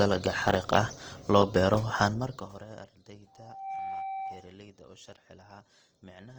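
Zipper noise runs from 2.04 to 2.92 s in this speech recording, starting right after "xariiq ah loo beero", as the level falls by roughly 25 dB. The drop is applied in 1 dB steps, around 30 per second, with no smoothing between them, so each jump leaves a tiny click and together they form a ticking, zipping texture over the fading sound. Opus compression damage is plainly audible throughout. The speech sounds rough and grainy, with harmonic parts turned noisy rather than hollowed out or swirling, while the full bandwidth is kept. That points to Opus in its music (CELT) mode at a low bitrate, likely around 24 kbps, where starved bands get filled with folded or noise-like energy instead of being left empty.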